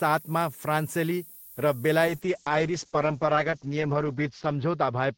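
Low bit depth with noise shaping runs throughout: the sound fits about 7 bits, with rounding error pushed upward into a steady, thin hiss roughly 20 dB below the speech. A call bitrate drop starts at 2.09 s and lasts to the end, fitting a fall from 32 to 8 kbps. The speech turns coarse and muffled as the top end narrows from 20 kHz to 8 kHz.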